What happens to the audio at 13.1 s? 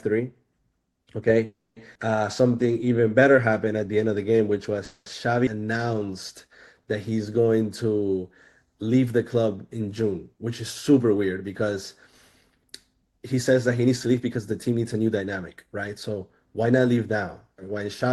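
At 13.1 s the audio is inside a jitter buffer speed-up that runs from 12.51 s to 17.01 s. The receiver's jitter buffer had built up more audio than its target, so it repeatedly cut out short segments one or a few pitch periods long to shed the excess delay, removing roughly 0.4 s in total. The speech plays at about 109% speed with its pitch unchanged, so it sounds noticeably hurried across that stretch.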